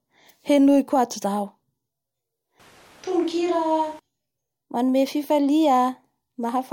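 Between 2.60 and 3.99 s speech abruptly turns hollow and bass-light, about 5 dB quieter with room noise, likely a switch to a distant microphone.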